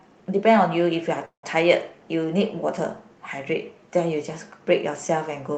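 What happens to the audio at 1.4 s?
From 1.25 to 1.45 s the sound smears into a fading buzz, then about 110 ms of silence, and resumes intact, likely a call audio freeze from delayed packets.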